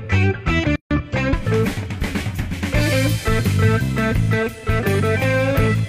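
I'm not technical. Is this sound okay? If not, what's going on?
No. There is a gap at a join of encoded pieces from 0.76 to 0.91 s: the sound cuts out for about 150 milliseconds, then resumes where it stopped. It was compressed in separate sections, and the padding added at each section's edges was left in when they were joined.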